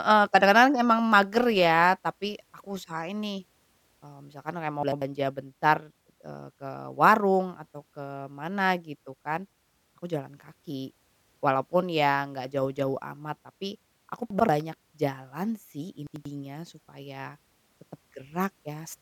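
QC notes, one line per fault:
4.83–5.02 s, 14.30–14.49 s and 16.07–16.25 s, chunks out of order: each time, one chunk of about 93 ms was delivered one chunk late and swapped with its neighbour. The speech briefly jumbles at the hard joins, after "misalkan kayak mau", after "amat tapi aku", and just before "supaya tetep".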